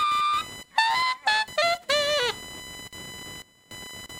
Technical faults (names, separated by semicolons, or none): computer activity noise